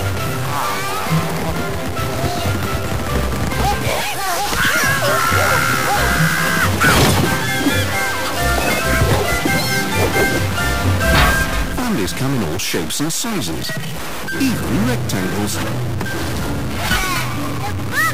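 A stuck bit runs through the whole clip, heard as a harsh, buzzy distortion laid over the sound. The likely cause is one data bit held fixed at 0 or 1 by a broken line or converter, so roughly half the samples land off by that bit's weight, an error step of around -20 dBFS. Because that bit flips with the sign of small values, quiet passages fill with loud noise instead of falling silent.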